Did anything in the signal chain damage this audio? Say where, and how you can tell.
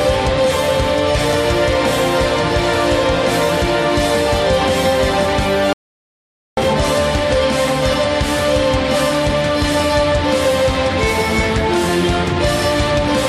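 Yes, an audio dropout to silence at 5.73–6.57 s, likely from an input link lost before recording. The sound cuts off mid-flow with no room tone left in the gap, which a noise gate would not do.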